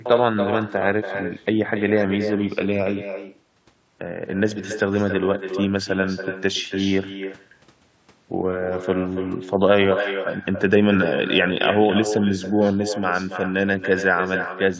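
Speech run through call microphone processing, which caps everything at 8 kHz, and the whole clip carries echo with no canceller. About a third of a second after every phrase, a thin copy returns roughly 9 dB down, picked up from the far end's loudspeaker and sent straight back.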